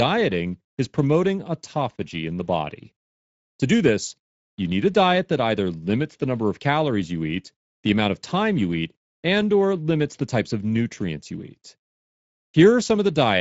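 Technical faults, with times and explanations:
Throughout: Speex codec, speech turns hoarse and grainy, the top band a noise-like fill stopping at 7.7 kHz, unlike a clean low-pass; fits about 17 kbps.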